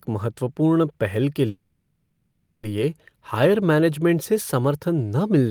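Right after "महत्वपूर्ण पहल के", at about 1.49 s, the speech hangs and the last sound gets stretched into a fading buzz or hiss until about 2.65 s, so you get roughly 1.1 s of filler before the talker picks up exactly where they left off. That's a call audio freeze. Packets were likely held up in transit and the jitter buffer ran dry. Nothing is lost, but everything after it now arrives over a second late.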